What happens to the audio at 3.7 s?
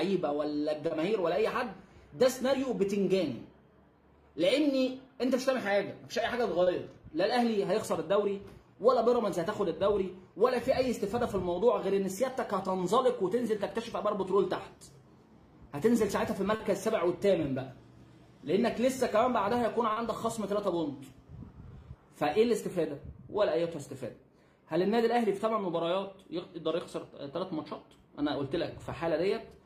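At 3.7 s you're inside a stretch of repeated timing corrections running from 2.87 to 16.03 s. The receiver keeps repeating tiny slivers of audio to stay in step, adding about a third of a second overall, so playback sits at 98% speed with faint hiccups and a slightly unsteady tempo.

Behind that is clock drift between sender and receiver, present through the whole clip: the sender's clock runs around two percent slow, so the jitter buffer keeps draining and needs topping up with those repeats. You hear small, unevenly spaced stumbles rather than one clear glitch.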